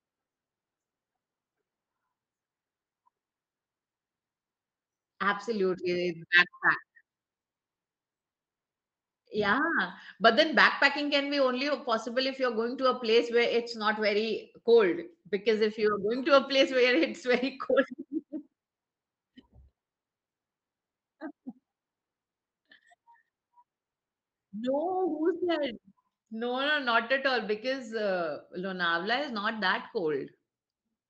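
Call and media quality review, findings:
Nothing to flag here; the speech comes through the call path just as it should, with the top end rolling off around 8 kHz in the way an Opus call typically sounds.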